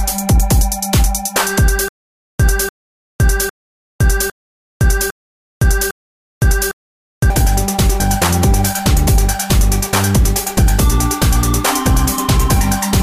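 1.88 to 7.30 s: stutter with silent gaps. One 294 ms burst replays six times between 511 ms of silence, likely a stalled stream. The identical repeats set it apart from plain dropouts.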